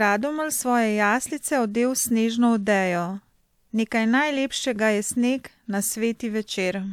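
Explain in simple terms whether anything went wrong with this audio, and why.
Nothing went wrong anywhere in this speech recording.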